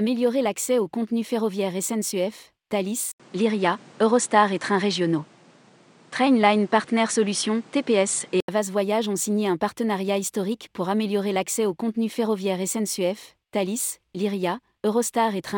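At 3.12 s the speech cuts out for 80 ms, then returns duller and boxier, with nothing above 10.5 kHz, a level shift of around 5 dB and fresh background noise about 30 dB down, lasting until 8.48 s: likely an input switched to a poorer device.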